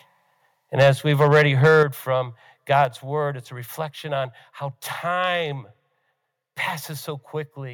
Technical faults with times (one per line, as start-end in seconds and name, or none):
0.79-0.90 microphone overload
0.83 microphone volume stepped down
1.20-1.83 microphone overload
1.83 microphone volume stepped down
2.75-2.82 microphone overload
2.85 microphone volume stepped down